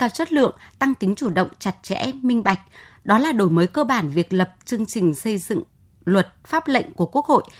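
At 0.37–0.43 s, 1.23–1.33 s and 2.41–2.55 s, lost packets were rebuilt from error correction: low-bitrate copies fill each gap, sounding rougher and noisier, with smeared, grainier spectrogram texture but no waveform dropout.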